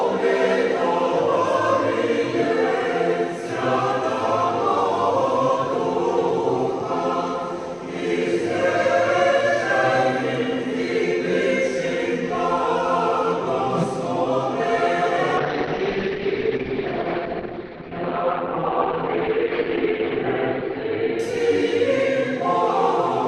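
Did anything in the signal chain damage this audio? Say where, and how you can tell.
Yes. A call bitrate drop runs from 15.43 s to 22.75 s, at the network-to-codec stage. The audio turns rough and muffled, with the top end cut from about 20 kHz to about 6 kHz and coarse, watery detail for roughly 4.5 s at its worst. That sound fits a fall from around 96 kbps to around 8 kbps. The call's bandwidth estimate collapsed, so the encoder coded with far fewer bits and discarded the highs until the rate recovered.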